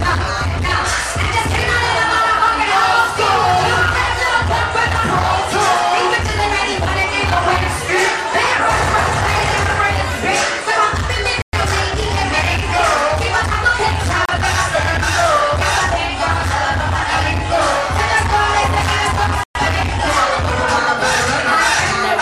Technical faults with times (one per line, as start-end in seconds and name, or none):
11.42-11.53 Bluetooth stall
14.25-14.29 Bluetooth stall
19.43-19.55 Bluetooth stall